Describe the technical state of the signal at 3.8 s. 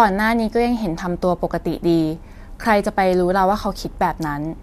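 At 3.8 s the speech signal is intact, with no dropout, distortion, clipping or other fault present.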